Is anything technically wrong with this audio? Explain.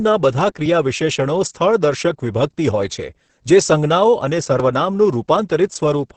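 Yes. The whole speech clip carries Opus voice compression with heavy codec damage. Nothing is present above about 8.6 kHz, so the top of the band is cut away and the voice sounds muffled. The coder models speech by linear prediction and codes the leftover excitation only coarsely. That leaves the voice hoarse and slightly robotic. This level of damage fits a low bitrate of around 10 kbps in Opus's SILK voice mode.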